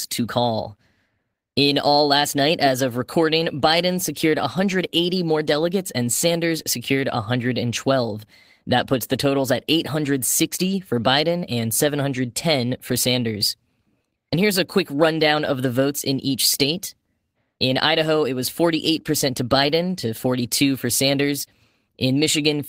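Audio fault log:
No faults heard.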